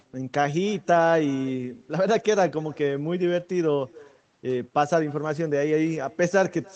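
All the way through the speech there's an echo with no canceller: the far end's speaker bleeds back in, so each phrase gets a faint, thin copy about a third of a second later, sitting about 26 dB down.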